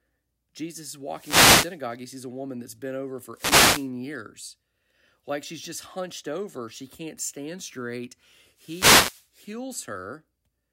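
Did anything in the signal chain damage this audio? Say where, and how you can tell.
Yes. Wireless microphone noise hits damage the radio link before conversion: bursts of static at 1.09–1.82 s, 3.32–3.90 s after "woman that's been over", and 8.54–9.32 s after "can't stand straight". Multipath cancellation fades the FM carrier, so receiver hiss swells over the speech. A spectrogram shows broadband grey smears; the waveform's noise floor visibly thickens.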